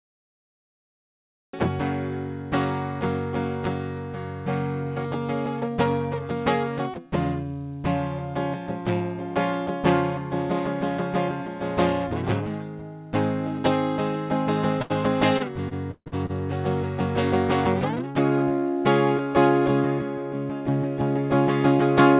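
Cut-off start, from 0 to 1.53 s: the capture began late, so the clip opens on about one and a half seconds of digital silence before the music appears abruptly at 1.53 s, already partway through a sound. There is no natural attack or fade-in. The music starts abruptly, as if a tape had been switched on mid-phrase rather than the recording catching the beginning of the passage.

Short stall from a late packet, at 14.82 to 14.92 s: one packet failed to arrive on time, the jitter buffer ran dry, and the receiver held the last bit of sound for about 78 ms until the packet turned up. It then resumed from exactly where it left off. Nothing is lost, but the music briefly hangs on one moment with a faint buzz or dip before moving on.

Repeated stalls (stutter), from 15.38 to 16.31 s: packets kept arriving late, so the buffer emptied six times in under a second. Each time the receiver stretched the preceding sound, and the longest hold was about 146 ms. 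Together these fills add up to roughly 273 ms, nearly a third of that stretch. No material is dropped, yet the music drags and hiccups unevenly, with the longer holds fading before playback catches up. Throughout, the call path carries nothing above 4 kHz, which fits a narrowband G.711-style codec.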